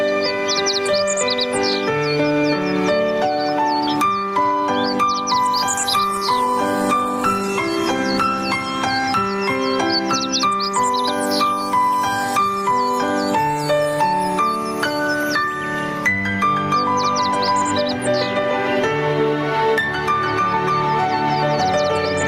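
Running through the whole recording is gain pumping. The likely cause is input gain set far too high for the microphone, with a fast limiter or compressor hauling the level down whenever something loud arrives. You hear this as the level ducking under each loud passage, with a swing of roughly 10 dB. Loud and quiet parts sit unnaturally close together, and the sound feels squashed and breathing.

From 5.81 to 8.53 s there is a call bitrate drop. The connection's bandwidth estimate fell and the encoder was forced to spend far fewer bits. The change in quality points to the rate halving, from around 32 to around 16 kbps, and holding at its lowest for about 2.6 s. Coded this coarsely, the sound turns rough and watery, and the top end thins out until quality recovers at 8.53 s.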